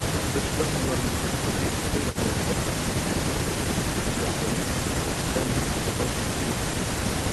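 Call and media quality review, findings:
Speech suppressed in double talk: brief level dips at 5.31–5.38 s (shallow, about 5 dB) and 5.85–6.02 s (about 10 dB). The waveform envelope notches and the spectrogram thins. Likely the echo canceller mistaking near-end speech for echo during overlap.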